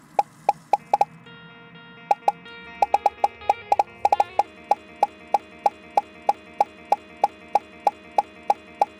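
Right from the start there's hard clipping running through the whole clip. The level is pushed about 4 dB past what the chain can pass, so the highest peaks get sliced flat. Only a small fraction of the samples actually hit the ceiling, so it isn't a constant fuzz. You hear it as a gritty crackle on the loudest moments, where those squared-off tops throw extra harmonics up into the high end.

Then at 4.77 s it turns into a broken-record loop that runs right to the end. A chunk of about 0.32 s repeats back to back, thirteen times in a row, with nothing new coming through after that point. That stutter likely comes from the player or stream stalling and resending the last fragment it held, so whatever should have followed is simply gone.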